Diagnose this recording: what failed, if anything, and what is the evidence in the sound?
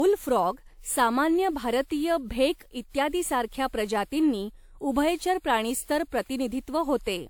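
Codec stage: generation loss runs through the whole speech clip. It sounds swirly and hollow, attacks are smeared, and nothing remains above 20.1 kHz. This likely comes from about seven re-encodes, fitting a 128 kbit/s WMA chain, each requantising on a shifted frame grid.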